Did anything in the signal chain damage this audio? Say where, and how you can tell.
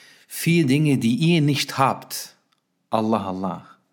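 No, nothing in the chain audibly damaged this audio.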